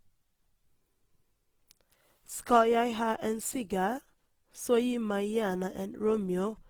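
Speech, with Opus compression audible all the way through: grainy, rough texture despite content reaching about 20.3 kHz, likely from CELT mode at a low rate, which fits 16 kbps.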